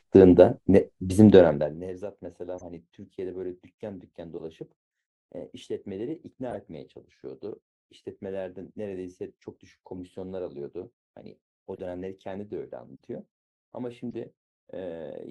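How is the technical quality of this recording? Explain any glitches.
The recording has two kinds of audible fault: a brief stretch of zipper noise early on and a string of short decoding glitches scattered through the speech.

Zipper noise, from 1.36 to 1.90 s: the level drops by about 20 dB, but the gain moves in many tiny unsmoothed steps, roughly two hundred a second, rather than as one continuous ramp. Each step leaves a small discontinuity in the waveform, so the fade carries a fine ticking, zipping texture for about half a second.

Corrupt frame decoded, at 2.58, 4.38, 6.51, 9.95, 11.76, 12.96 and 14.11 s: each time, one to three compressed frames arrive with damaged bits and the decoder plays them anyway. Misread gains and codes place energy at the wrong frequencies for 30 to 70 ms, producing a short chirp, squeak or noisy blip over the speech. The error levels range from faint, around -45 dBFS, to much stronger, near -20 dBFS at 6.51 s.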